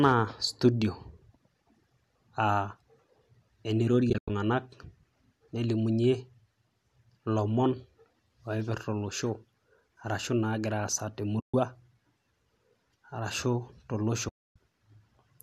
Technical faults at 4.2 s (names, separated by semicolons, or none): AAC frame loss with muting